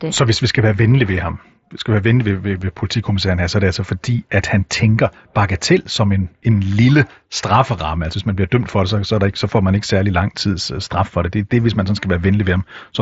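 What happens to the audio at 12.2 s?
Nothing goes wrong at 12.2 s; the speech there comes through intact, carried by the Bluetooth mSBC headset path as it is throughout, with the recording's usual top end stopping short of about 7.7 kHz.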